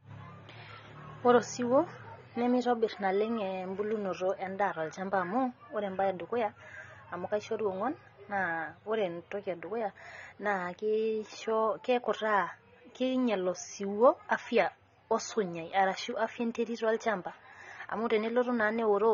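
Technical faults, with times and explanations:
throughout, AAC compression: a likely low-bitrate AAC-LC encode, fitting about 24 kbps, drops the top end and thins bands, leaving speech dull, smeared and fizzy on sibilants.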